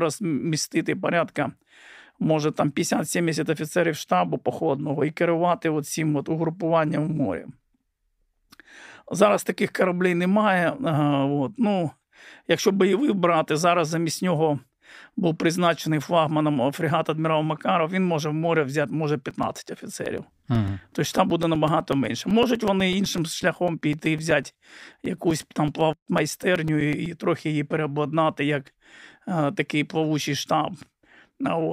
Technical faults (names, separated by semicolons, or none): periodic USB or driver dropouts